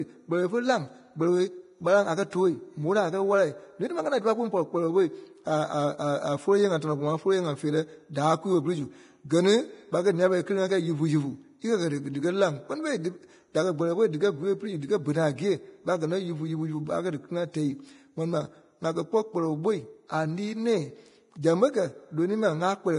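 From start to finish the speech carries heavy Vorbis compression damage, likely from encoding at a low rate, which the sound places near 30 kbps. The top end is cut off lower than usual, and the treble just below that cut-off turns to hiss and grain because fine detail was quantised into noise of similar energy. Tones sound roughened and consonant attacks blurred. A plain low-pass filter would dull the top without adding this granular hiss.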